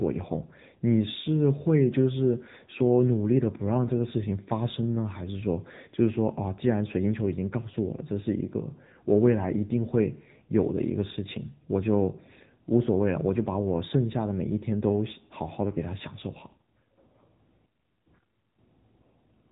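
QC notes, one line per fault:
Throughout: AMR narrowband mobile codec. The speech has been squeezed through the narrowband mobile codec, which samples at 8 kHz and rebuilds the voice from a vocal-tract model driven by sparse pulses in 5 ms slices of each 20 ms frame. Nothing above 3.8 kHz survives, so the sound is dull and telephone-like. The plainly audible buzzy, synthetic edge on the speech points to a low bitrate of roughly 8 kbps.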